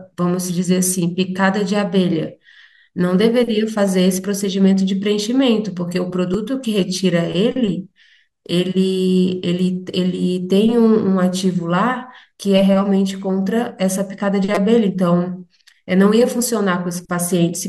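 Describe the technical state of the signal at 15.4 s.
At 15.4 s the speech signal is intact, with no audible fault at that moment.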